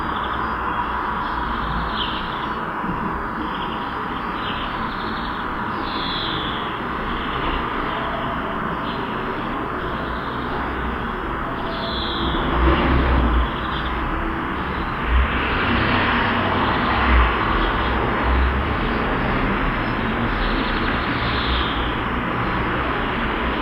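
No technical faults are audible.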